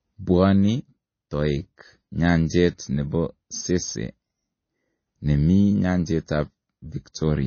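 Throughout, the speech has a hard ceiling at 6.5 kHz, a flat-topped spectrogram, and flickering high bands with a watery swirl, likely from MP3 compression at a low bitrate near 24 kbps.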